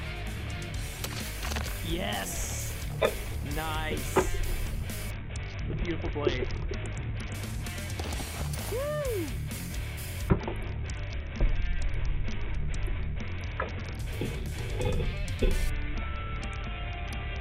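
Three times, from 5.10 to 7.34 s, 10.29 to 13.99 s and 15.70 s to the end, the treble dulls and a gritty noise rises: a Bluetooth SBC bit pool drop, the link falling from a pool near 28 to about 6, which fits roughly 60 kbps, starving the upper sub-bands.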